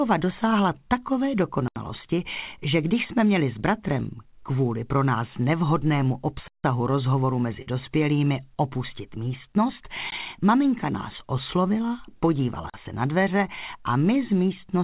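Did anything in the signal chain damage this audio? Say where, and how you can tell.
Yes. The sound drops abruptly to dead silence four times: 1.68 to 1.76 s (80 ms), 6.48 to 6.64 s (160 ms, a clear hole), a short gap at 10.10 s (about 17 ms), and 12.70 to 12.74 s (40 ms). These are blocks of digital silence at the driver or buffer stage. The output buffer was likely not filled in time and went out as zeros, with no fade.

From 7.62 to 7.68 s there is a brief smear where about 40 ms of audio is replaced by a stretched continuation of the preceding sound before it blends back. This is short concealed packet loss on the network stage. The packets arrived too late for the jitter buffer, so the receiver's concealment extrapolated the last sound to cover the hole. This happened within a call path whose band stops at 4 kHz, which fits a narrowband G.711 codec.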